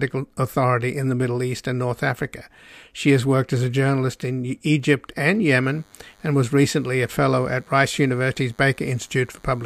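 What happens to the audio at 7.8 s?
DECT cordless phone buzz runs through 7.8 s. It begins at 5.64 s and continues to the end of the clip. A nearby DECT handset or base station sends a short radio burst every 10 ms, and the audio circuitry rectifies that energy into the signal path. The result is a steady buzz with a 100 Hz repetition rate and many harmonics, sitting roughly 35 dB below the speech and continuing unchanged beneath it.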